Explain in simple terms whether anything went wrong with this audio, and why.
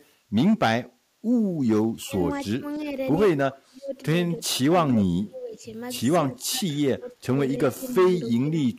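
The room sound behind the speech dips briefly at 0.17 to 0.3 seconds and again at 0.96 to 1.21 seconds. This is background gated by the echo canceller, which turned the microphone down while the loudspeaker played.

The speech drops away, sometimes sharply, in pieces during 1.84 to 2.95, 3.48 to 5.62 and 6.45 to 8.54 seconds. This is speech suppressed in double talk, likely from both sides talking at once.

From 2.37 to 2.79 seconds a very faint copy of the speech follows about 308 ms late. This is echo leak, likely loudspeaker sound the echo canceller failed to fully remove.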